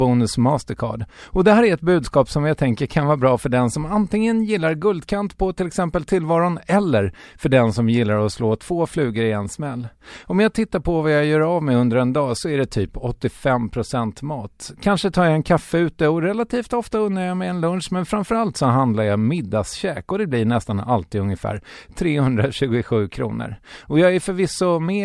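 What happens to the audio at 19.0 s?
Nothing goes wrong at 19.0 s; the speech carries on intact through that moment, with no dropout, click or distortion.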